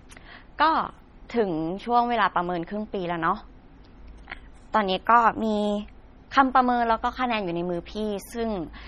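Throughout the speech, the treble stops dead at 16.1 kHz, and sibilants turn swirly and watery as weak frequency detail flickers between frames, most likely from MP3 compression at a starved rate near 32 kbps. Simple low-pass filtering would dull the sound without that shifting, metallic chirping.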